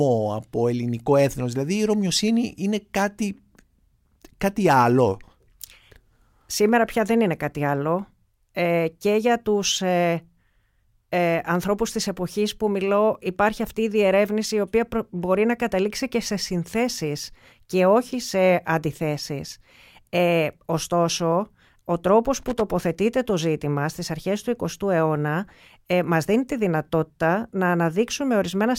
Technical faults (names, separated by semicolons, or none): loose connector crackle